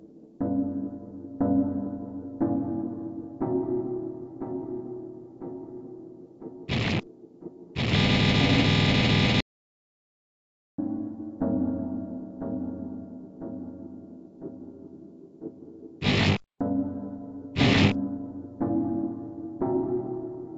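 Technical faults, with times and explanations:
9.41 to 10.78 s, audio dropout to silence: the sound stops mid-flow and returns about 1.38 s later, with silence and no room tone between. The input was likely lost while the recorder kept writing silence, so everything in that stretch is gone.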